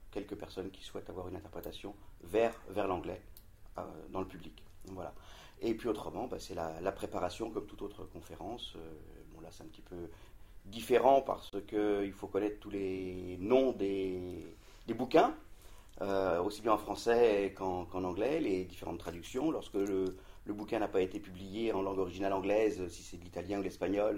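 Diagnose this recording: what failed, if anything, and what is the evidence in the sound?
Two brief dropouts to silence occur, one at 11.50 to 11.53 s lasting about 32 ms and a shorter one at 16.96 s of about 7 ms, with the sound resuming after each gap. The pattern points to a Bluetooth stall at the wireless playback link. The likely cause is radio interference that delayed packets, letting the headphone buffer run empty so output halted until retransmitted data arrived.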